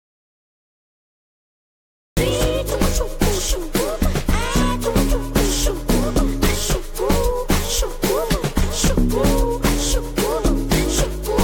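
Right from the start, the clip sits in dead silence until about 2.17 s, and the sound only arrives mid-flow at that point. That's an audio dropout to silence, already under way when the clip begins. There's no room tone or hiss underneath, just silence, so the input was likely cut off, by a disconnected device, a failed link or a mute, while the recorder kept writing. Whatever happened before 2.17 s simply isn't there.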